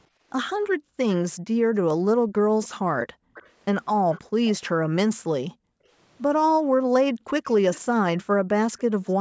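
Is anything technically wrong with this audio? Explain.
Yes, two faults recur through this speech recording.

Background gated by the echo canceller appears from 0.08 to 3.34 s, from 4.27 to 7.26 s and from 8.25 to 8.48 s. While the far end's audio played through the loudspeaker, the canceller clamped the microphone down hard, by as much as about 40 dB. The room tone sinks or vanishes in bursts totalling roughly a second and a half in each of the first two spans, then returns once the canceller releases. Unlike a network dropout, the cut follows loudspeaker activity.

An echo leak is heard from 2.64 to 4.51 s, briefly at 7.73 to 7.80 s, and again from 8.78 to 9.13 s. A faint copy of the speech trails the original by 304 ms, roughly 20 dB down in the first two and around 30 dB down in the last. It is likely that the far side's canceller did not fully subtract what its microphone picked up from its loudspeaker, so the residue was sent back. 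A fixed delay of about a third of a second sets it apart from room reverberation, which smears continuously and has no distinct repeat.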